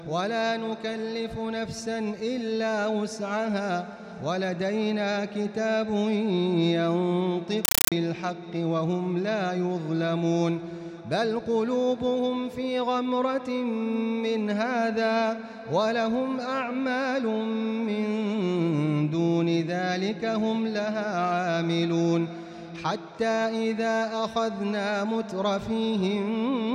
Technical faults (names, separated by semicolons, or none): compressed stream played as audio